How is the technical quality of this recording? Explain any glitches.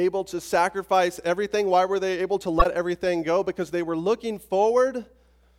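The recording has one clear glitch. At 2.59 to 2.66 s, between "were they able to" and "everything go", a corrupt frame was decoded: a few damaged compressed frames played anyway, throwing energy to wrong frequencies as a brief glitch. A spectrogram shows a brief bright smear unrelated to the speech harmonics, and the waveform a sudden spike.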